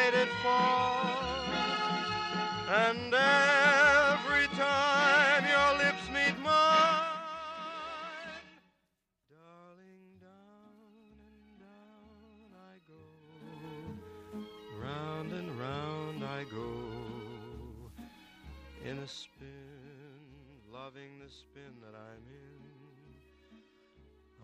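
Zipper noise at 13.2–13.68 s and 18.8–19.64 s: unsmoothed 2 dB gain steps, rising about 15 dB then falling about 15 dB, click audibly as a ticking.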